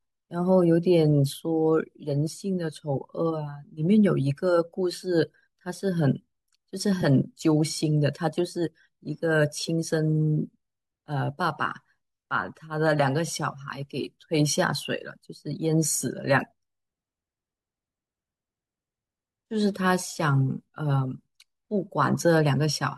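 At 7.02 s there is a brief AAC frame loss with concealment. About 10 ms of audio, consistent with one lost frame from the low-delay AAC stream, was rebuilt by the decoder from the preceding spectrum. It is heard as a tiny smeared, noisy blip. On a spectrogram it shows as a thin vertical smudge where harmonic detail blurs into noise. The waveform shows a short patch of altered texture rather than a gap.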